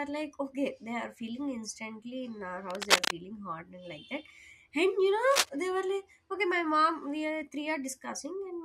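Speech with cable scratch noise: after "in our", 2.70 to 3.12 s, and again 5.31 to 5.49 s, dense uneven crackle sits a few dB above the voice, showing as broadband vertical spikes, likely from a worn cable or connector being moved.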